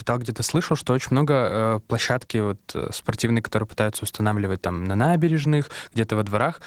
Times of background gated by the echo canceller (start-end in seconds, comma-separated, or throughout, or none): none